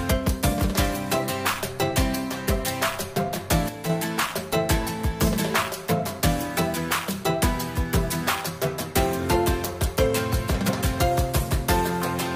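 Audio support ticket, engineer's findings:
One channel drops out, 3.69–3.90 s: abrupt level dip of about 6 dB for roughly 0.2 s, then full return. Likely a momentary loss of one stereo leg upstream of the mono fold-down, halving the shared content and removing anything unique to that channel.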